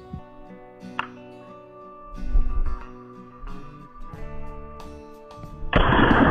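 No technical faults can be heard anywhere in the audio. Nothing in the sound points to a problem with how it was captured, processed or delivered.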